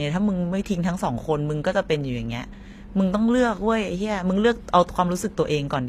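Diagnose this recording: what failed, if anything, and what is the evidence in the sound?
Codec stage: s sounds go gritty and lispy throughout, likely HE-AAC compression faking the treble by copying lower bands upward, which fits around 24 kbps.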